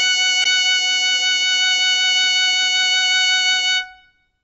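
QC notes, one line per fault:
throughout, AAC compression: The music sounds dull and a bit smeared, with nothing above 8 kHz and a warbly, fizzy edge on sustained parts. The damage is plainly audible. The likely cause is AAC-LC at a low bitrate, around 24 kbps, where the encoder cuts the top off and starves the remaining bands.
0.44 s, CD skip: There's a tick and a very brief mute, then the music picks up from a different spot. A knock or a flaw made the laser jump onto another turn of the disc's spiral, so the player drops out for a moment and resumes somewhere else.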